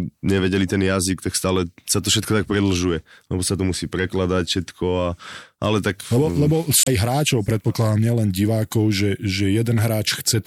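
At 6.83 to 6.88 s, right before "hráčov predpokladám nielen", there's a brief blip of damaged data in the compressed stream. A chunk of the encoded speech got corrupted, so the decoder misread those frames and briefly lost sync before locking onto the next clean one.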